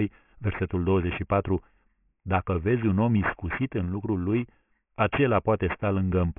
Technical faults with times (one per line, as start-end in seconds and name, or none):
0.00-6.38 aliasing